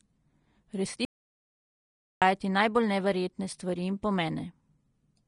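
From the first moment, the speech is hissy and grainy, and nothing reaches above 10.6 kHz. The treble is coarse, with a noisy, sandy texture in place of fine detail, and consonant attacks are softened. This is most likely Vorbis compression at a low bitrate, consistent with something around 34 kbps. What sets it apart from a plain low-pass filter is that grain: the upper band is filled with noise of similar energy rather than simply removed.

At 1.05 s the audio drops out to silence and returns at 2.22 s, so about 1.17 s of the speech is missing. The input feed was likely lost while writing continued as silence. This is not a natural pause or a noise gate, because the gap is silent with no room tone at all.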